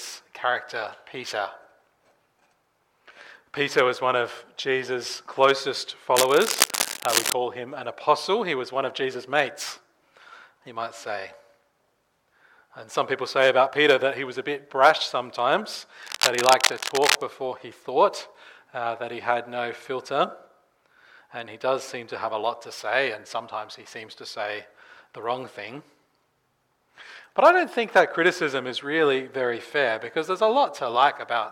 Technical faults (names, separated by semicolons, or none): cable scratch noise